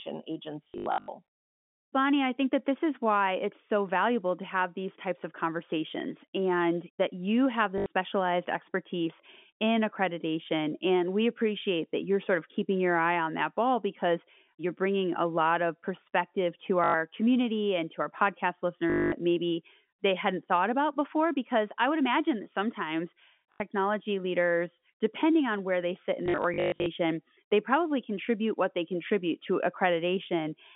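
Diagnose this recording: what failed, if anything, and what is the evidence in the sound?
Network packet loss with last packet repeated: at 0.65–1.08, 7.78, 16.84, 18.90–19.12, 23.52 and 26.26–26.86 s, the sound buzzes at 50 Hz (fitting 20 ms packets), with repeated audio rather than silent gaps.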